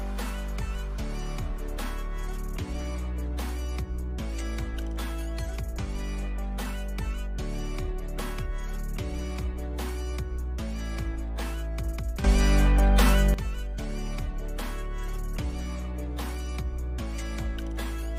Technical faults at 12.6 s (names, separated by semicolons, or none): sudden gain jump